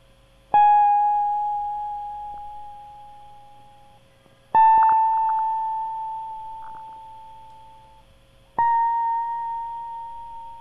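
DAB burbling breaks into the music at 2.34 to 2.38 s, 4.78 to 5.39 s and 6.63 to 6.97 s. Uncorrected bit errors, a small fraction of a percent, corrupt MP2 sub-band samples and scale factors, so narrow bands lurch in level frame by frame, giving short blips of noise.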